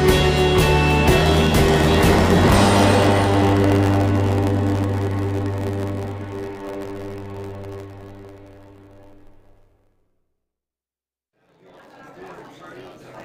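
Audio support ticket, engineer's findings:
Block size mismatch (truncated) from 1.17 s to end. Steady buzz at 91.9 Hz. Audio runs 1.07 times fast, pitch about normal. Upstream stage writes longer blocks than downstream reads. Block tails discarded. Buzz rate fits 512-sample written blocks.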